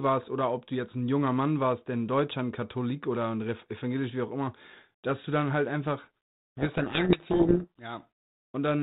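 From 6.58 to 7.82 s the speech sinks under harsh, grinding distortion, then clears. This is a codec payload misread: the 32 kbit/s G.726 code words arrive in a different bit order than the decoder assumes, so each sample difference is rebuilt wrongly.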